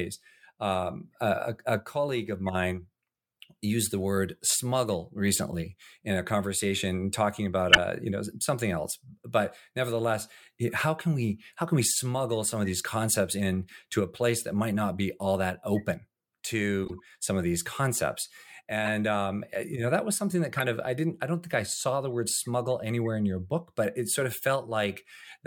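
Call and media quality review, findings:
Corrupt frame decoded: short chirps and noise blips at 5.51–5.53, 7.70–7.78, 16.85–17.00, 18.86 and 20.57–20.63 s, one to several frames each, loudest near 7.7 s. Decoder played bit-damaged frames, and misread gains put energy at wrong frequencies. Adds spurious sound, unlike dropouts or smoothed concealment.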